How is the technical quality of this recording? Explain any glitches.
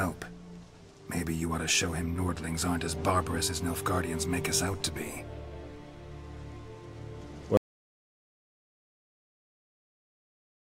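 The recording has one clear fault. At 7.57 s an audio dropout to silence begins and runs to the very end, so the sound stops abruptly mid-flow and never returns. The input was likely lost while the recorder kept writing zeros. The waveform becomes a dead-flat line, and the spectrogram goes completely blank with no room tone at all.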